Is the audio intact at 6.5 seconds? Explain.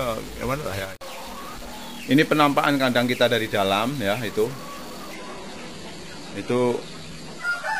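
No. Two things are going on at 6.5 s. The first is a stuck bit, and it runs through the whole clip. There's a distorted edge on everything, and the quiet parts are filled with gritty noise instead of sitting silent. That's likely a data line or converter bit held at one value, so roughly half the samples come out offset by that bit's weight and small values flip with their sign.

The second is an adaptive stream at a lower bitrate, from 5.14 s to the end. Quality drops suddenly with no gap. The treble is gone above about 11.8 kHz, and codec artefacts come up. It sounds like the player switched from a decent AAC stream to a low-bitrate HE-AAC version around 16 kbit/s, which is what happens when the connection slows.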